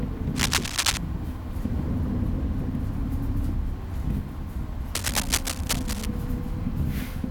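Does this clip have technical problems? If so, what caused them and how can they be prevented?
Yes, cable scratch noise from 0.35 to 0.98 s and from 4.95 to 6.06 s: dense, uneven rustling bursts about as loud as the sound, likely a worn connector shifting its contact resistance. Unlike isolated clicks, the noise is dense bursts of scratching. Replace or reseat worn cables and keep them still while recording.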